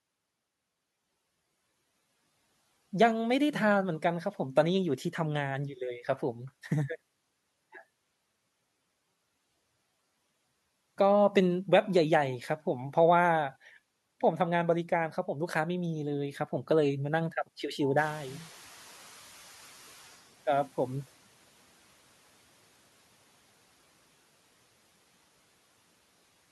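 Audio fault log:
17.96–20.23 s, noise suppressor catching up: the room noise in this speech jumps by about 15 dB at around 18 s. For the first moments after that the suppressor is still working from its older, quieter noise estimate, so the louder background passes with little reduction. Over roughly 2.3 s the estimate rises to meet the new level and the noise sinks by about 12 dB, settling some 27 dB below the speech.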